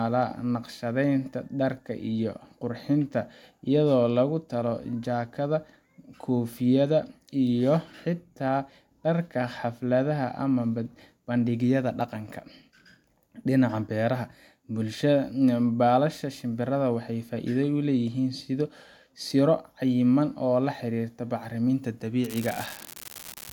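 Speech, with an unreliable data bit from 22.24 s to the end at 23.53 s, just after "laxirirta bacriminta". One marginal data line flips its bit in a random share of samples, so each error is an identical spike of about -16 dBFS, heard as a steady crackle that continues through pauses.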